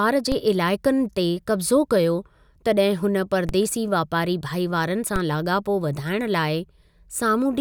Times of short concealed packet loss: none

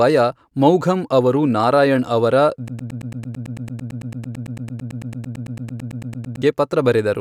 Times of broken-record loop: 2.68-6.42

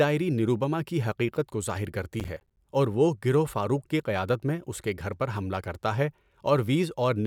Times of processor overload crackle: 2.20-2.57

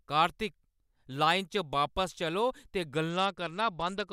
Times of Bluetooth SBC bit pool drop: 3.10-4.12

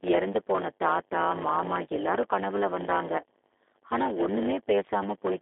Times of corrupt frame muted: none

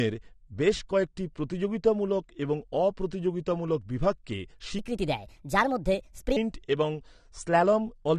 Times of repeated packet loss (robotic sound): none

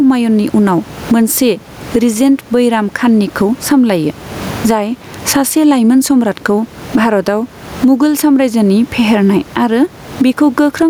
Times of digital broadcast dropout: none

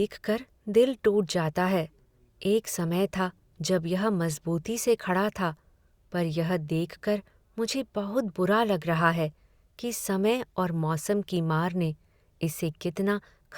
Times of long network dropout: none

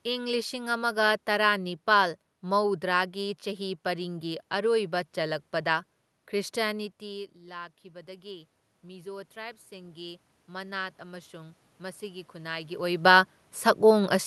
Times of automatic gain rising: 7.00-12.96

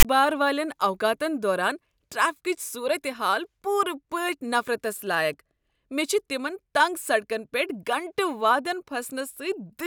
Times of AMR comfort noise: none

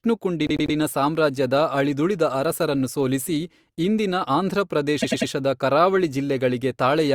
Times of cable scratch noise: none

